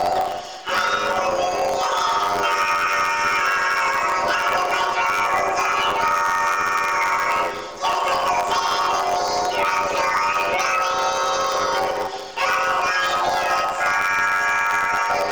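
Throughout, planar audio read as interleaved: 10.88 ms blocks each replay twice at double speed, producing a robotic buzz near 91.9 Hz without a clear octave shift.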